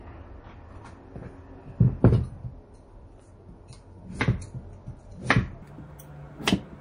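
From the start, the whole clip carries plainly audible MP3 compression, likely from a low bitrate around 40 kbps. Weak detail flickers in and out between frames. That gives a watery, swirly texture with metallic chirps on bright sounds. Sharp attacks are smeared.

At 5.62 s a section at the wrong speed begins and runs to the end. It plays about 1.57 times too fast. Pitch rises with it, by roughly seven semitones. The sound turns high and hurried at once. This is likely a playback or edit clock mismatch.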